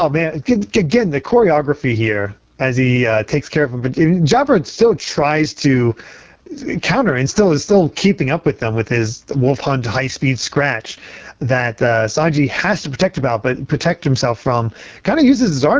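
Throughout, the level swings by around 10 dB, ducking under each loud syllable; this gain pumping likely comes from a fast limiter fighting excessive microphone gain. From start to end, the speech sounds rough, raspy and buzzy, with hissy upper detail. That is heavy AMR wideband (HD Voice) codec damage, which fits its lowest 6.6 kbit/s mode.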